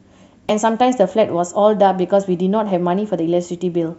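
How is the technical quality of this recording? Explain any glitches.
One glitch affects the speech. At 0.49 s there is damaged data in the compressed stream: corrupted frames make the decoder lose sync and jump to the next header, producing a brief glitch.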